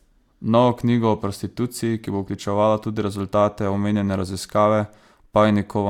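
Nothing in this bit of speech trips any alarm, and there's no technical fault to point to anywhere along the way.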